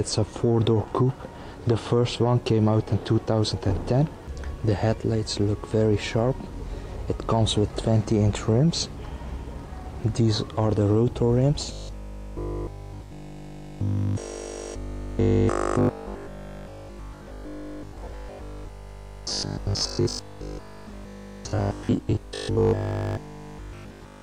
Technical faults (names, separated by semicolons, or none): robotic sound from repeated short buffers